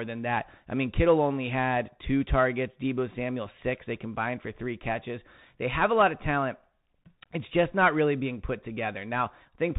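Throughout, the Bluetooth CVSD headset codec confines speech below 4 kHz, roughens s sounds and adds granular hiss, which fits 64 kbps one-bit coding rather than a clean low-pass filter.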